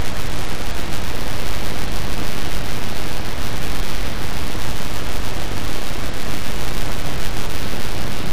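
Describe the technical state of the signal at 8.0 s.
At 8.0 s, two faults overlap. The first runs through the whole clip: a filter restarted on every block. Each block starts its filtering from silence rather than carrying over from the last one. That sets off a small transient at every boundary. The result is a steady buzz at 100 Hz, which points to blocks of 10 ms. It rises and falls with the level of the sound.

The second is a Bluetooth SBC bit pool drop. It begins at 7.55 s and lasts to the end of the clip at 8.33 s. The link appears to have come under strain, and the encoder cut its bit budget sharply. The dullness fits a fall from a bit pool of 28 to about 8, near 72 kbps. The highest sub-bands get almost nothing, and the remaining bands are coarsely quantised. At 8.0 s the treble is dulled and a gritty noise sits over the sound.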